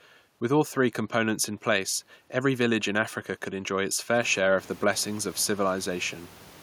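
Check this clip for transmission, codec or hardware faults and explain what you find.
No transmission, codec or hardware faults can be heard in the speech. Room noise sits beneath it and rises by about 18 dB around the 4-second mark, yet remains about 25 dB below the speech.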